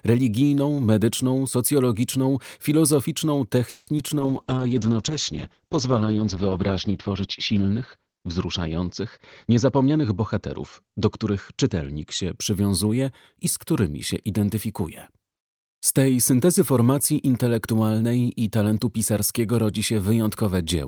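At 3.69 to 3.89 s the audio stops advancing, and the last sound is stretched into a fading buzz for about 180 ms, with a brief moment of near-silence before it resumes where it left off. This is likely a call audio freeze, where delayed packets left the jitter buffer empty.

Shortly after, from 3.97 to 4.00 s, a short concealed packet loss leaves a brief smear. Roughly 20 ms of audio never reached the decoder, so the receiver extrapolated from the preceding sound for a moment and then blended back into the real signal.

From 4.2 s to 12.43 s a call bitrate drop takes the encoder from 40 kbps down to 8 kbps, sitting at the lowest rate for about 2.4 s. Coarser coding makes the sound rough and watery, and the audio bandwidth narrows from 20 kHz to 8 kHz, leaving it muffled.

Between 9.19 and 10.98 s, within that degraded stretch, a jitter buffer speed-up runs the audio at about 110% speed with unchanged pitch. 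The receiver repeatedly cut out pitch-period-sized pieces, about a fifth of a second in total, to shrink excess buffered delay, so the sound feels hurried.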